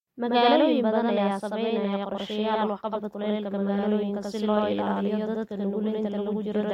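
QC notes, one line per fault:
Throughout: channel delay (doubling). One channel arrives 85.3 ms late, which fits a 4096-sample buffer, and both are summed to mono. The late copy sits at equal level, so every syllable of the speech is followed by a distinct slapback repeat.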